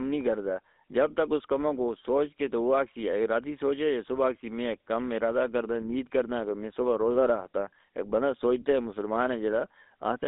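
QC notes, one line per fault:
Throughout, GSM full-rate codec: the speech passes through a narrow line band of roughly 250 Hz to 3.7 kHz, and the coding damage is plainly audible as a buzzy, gravelly roughness. The vocal tract is modelled and driven by a regularly spaced pulse excitation, which fits a 13 kbps full-rate stream.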